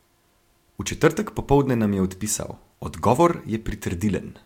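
No technical faults can be heard anywhere in the recording. The speech continues without any interruption or disturbance from its opening to its close.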